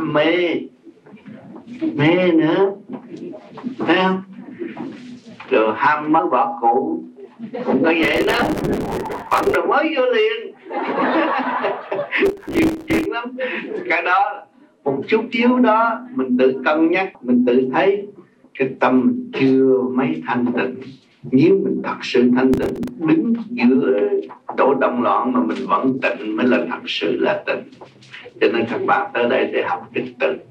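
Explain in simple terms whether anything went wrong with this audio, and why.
Compressed frames skipped: at 6.18 to 6.20, 11.26 and 23.24 s, a few chunks of the compressed audio never reached playback, being missing or rejected as damaged. The sound jumps ahead, losing about a tenth of a second, nearer 0.15 s at 23.24.

Processor overload crackle: from 8.03 to 9.55 s, 12.24 to 13.06 s and 22.54 to 22.88 s, the processor fell behind and kept missing deadlines for its tiny buffers, each just a few milliseconds long. Stale audio filled each gap, so the sound turns gritty and crackly until the load eases.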